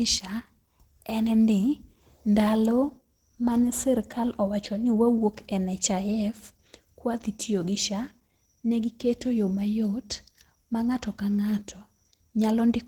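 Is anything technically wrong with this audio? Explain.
Yes. Opus compression runs throughout the whole clip. The speech has a plainly audible coded quality, and this is likely the cause. At a low bitrate that fits roughly 16 kbps, the encoder drops into its hybrid speech mode. It models the lower band as speech and fills the upper band with shaped energy instead of real detail. The speech therefore comes across hoarse, grainy and somewhat muffled, even though the bandwidth stays full, reaching up to about 20.1 kHz.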